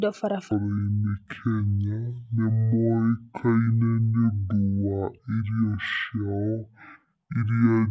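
Speech clip with a wrong sample rate from 0.51 s to the end: everything runs at half speed and drops a full octave, which fits 32 kHz audio played back at 16 kHz.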